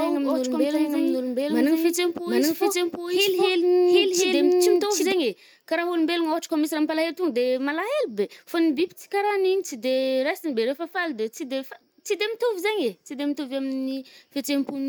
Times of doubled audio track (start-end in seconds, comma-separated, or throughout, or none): 0.00-5.12